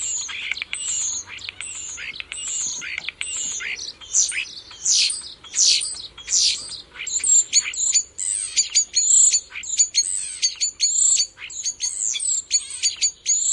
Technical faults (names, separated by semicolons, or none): none